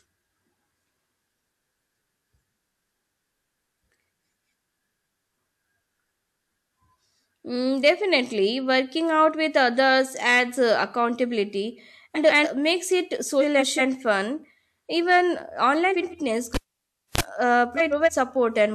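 Speech with two kinds of fault. Frames out of order: four times, two neighbouring runs of frames arrived in the wrong order and were decoded that way, so each stretch plays with its halves exchanged. This produces a garbled flutter, but no time is lost. The swaps fall at 12.15–12.47 s, just after "others adds uh accountability", with 139 ms blocks; at 13.41–13.80 s, just after "makes it", with 186 ms blocks; at 15.91–16.14 s, with 93 ms blocks; and at 17.77–18.09 s, with 139 ms blocks. Cable pulled and plugged in: at 16.54–17.21 s a live lead was disconnected and reinserted. A pop is followed by about 0.61 s of near silence, a 34 ms burst of 50 Hz mains buzz as the tip touches, and a second pop when the sound returns.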